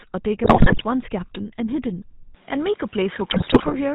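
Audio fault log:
Throughout: GSM full-rate codec. The speech carries a clearly audible buzzy, gravelly roughness, consistent with the 13 kbps full-rate codec. It models the vocal tract as a filter and drives it with a sparse, regularly spaced pulse excitation that keeps only every third sample, so the fine structure of the voice is replaced by a coarse, rasping texture. Nothing above 4 kHz survives, which leaves the speech narrowband and slightly muffled.
0.44–0.84 s and 3.30–3.76 s: GSM bit errors. In both stretches the speech breaks up into squawks, pops and a gargling quality. The bit error rate is about 6.3% in the first burst and about 5.6% in the second. Corrupted bits reach the decoder's filter, pitch and gain parameters, so individual frames come out with a bent spectrum, a wrong pitch or a sudden jump in level. That frame-by-frame damage is what turns the voice into those short, harsh bursts.
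2.35 s to end: input switched to a poorer device. The tone changes abruptly at 2.35 s, with no gap and roughly no change in level. From this point the band is narrower, and a faint new background noise appears, roughly 30 dB below the speech. The sudden change in coloration and noise floor, partway through the recording, most likely comes from the system moving its input to a different, lower-quality microphone or headset path.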